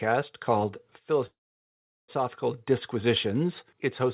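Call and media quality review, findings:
Call audio freeze, 1.26 to 2.10 s. A brief fading buzz, then about 0.75 s of near silence. Likely jitter buffer underrun from held-up packets. Speech resumes where it stopped. Nothing lost, playout now 0.82 s later. 4 kHz band edge fits G.711 mu-law.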